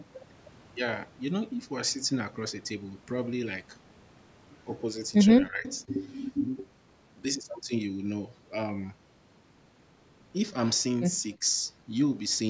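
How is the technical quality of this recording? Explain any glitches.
The recording has two kinds of short call-processing glitches in the speech, and the call's microphone processing leaves nothing above 8 kHz.

Speech suppressed in double talk, at 5.49–5.65 s and 11.36–11.44 s: the voice dips by roughly 10 dB, then roughly 15 dB. This is likely an echo canceller turning the talker down while both sides spoke.

Echo leak, at 5.67–5.77 s: a faint copy of the voice arrives 299 ms late, about 25 dB below the speech. It is likely loudspeaker echo that the canceller failed to remove.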